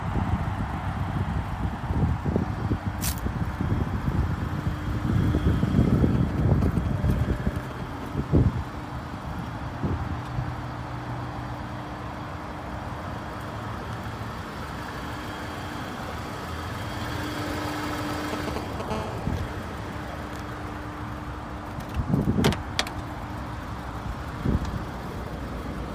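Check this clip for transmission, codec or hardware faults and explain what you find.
There's mobile phone interference in two forms. GSM signalling bursts appear from 6.15 to 8.05 s, around 10 dB under the audio, and from 18.11 to 18.82 s at roughly the signal's own level. A nearby 2G phone's radio pulses are rectified by the circuitry, giving a galloping run of ticks and brief 217 Hz buzzes. Then from 18.91 to 20.74 s there's GSM phone buzz, about 13 dB below the signal. That's the phone settling into a call and bursting steadily 217 times a second, which becomes a continuous, raspy, harmonic-rich buzz unrelated to the audio.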